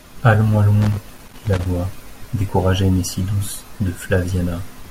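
From 0.82 to 1.66 s the speech breaks into an irregular burst of scratching and crackle. This is loose connector crackle: a worn or dirty contact repeatedly losing and regaining connection, chopping the signal, while any DC on the line turns each break into a pop.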